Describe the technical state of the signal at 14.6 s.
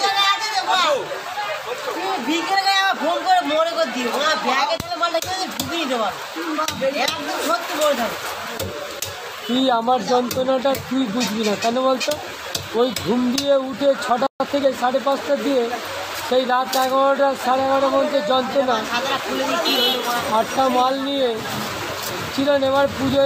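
At 14.6 s the sound is in a time-compressed catch-up from 14.40 to 14.66 s, running about 1.5 times fast by splicing out short pieces. Unlike a resampled speed-up, pitch stays normal.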